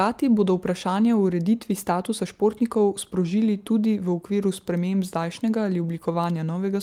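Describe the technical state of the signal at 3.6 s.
At 3.6 s the speech signal is intact, with no audible fault at that moment.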